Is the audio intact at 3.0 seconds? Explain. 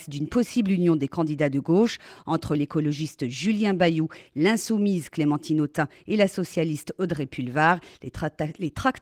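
Yes, the audio is intact at 3.0 seconds, with no dropout, glitch or other fault at that moment.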